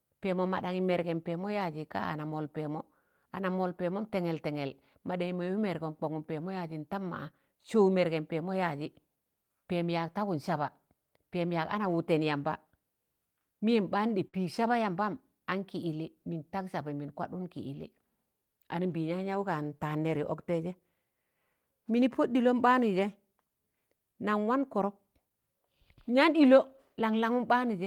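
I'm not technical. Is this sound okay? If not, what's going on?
No. At 14.27 seconds the speech breaks for a split second. This is a burst of packet loss: some audio was lost or arrived too late to play. The player held the last sound for 56 ms and let it fade. Then it jumps ahead, skipping 60 ms.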